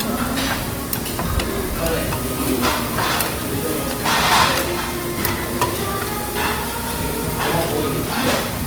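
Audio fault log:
Throughout: Opus compression. The audio is rough and grainy, with plainly audible codec damage, and content still reaches about 20.3 kHz. This fits the likely cause, Opus in its full-band music mode at a low rate near 24 kbps, filling under-resourced bands with folded or noise-like energy.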